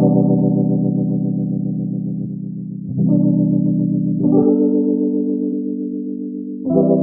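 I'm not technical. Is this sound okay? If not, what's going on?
No. There is damaged data in a compressed stream: parts of the file were corrupted, so the player briefly lost its place and had to find it again. You hear this as two short chirps or blips, at 2.24–2.26 s and 5.52–5.54 s.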